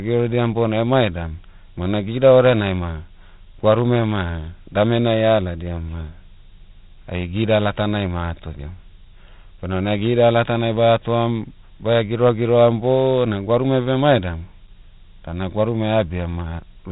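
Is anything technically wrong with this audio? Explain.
Yes. Throughout, this speech carries heavy 4-bit ADPCM compression. Coarse predicted steps leave gritty hiss tracking loud passages and smeared attacks, with nothing above 3.8 kHz, which fits a 32 kbps stream.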